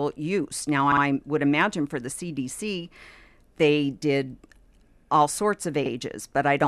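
At 0.92 s, just before "would imagine for the", repeated frames make a block of about 52 ms play twice more, fitting a pair of compressed frames sent again. At 5.85 s a block of the same length repeats once. Unlike echo, each repeat is identical and undecayed, stuttering.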